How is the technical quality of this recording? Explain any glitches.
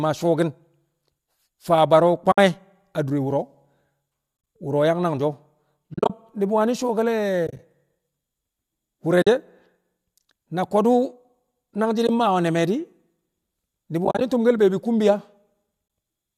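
The recording has eight short dropouts from AAC frame loss with muting, at 2.32–2.38, 4.37–4.47, 5.94–6.10, 7.47–7.59, 9.22–9.27, 12.07–12.09, 14.05–14.21 and 15.88–15.90 s. Each lasts 20 to 130 ms, and the longer ones are broken into bursts of roughly 30–40 ms. The decoder zeroed the spectrum of each lost frame, and the overlapping windows fade the sound smoothly out and back in, leaving soft holes. A spectrogram shows them as narrow full-band vertical gaps with blurred edges. On the waveform they appear as tapered dips to silence. The speech carries the light coloration of its compression, likely AAC-ELD low-delay coding.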